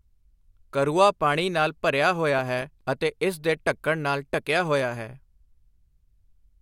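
A speech recording in which the processor fell behind between 2.39 and 2.81 s and missed a handful of deadlines for very short audio buffers, each only a millisecond or two long, which points to a heavily loaded system running a small buffer. Every missed buffer drops out to silence with hard edges, so the voice is broken by tiny clicking gaps, heard together as processor overload crackle, a gritty tearing that stops once the load clears.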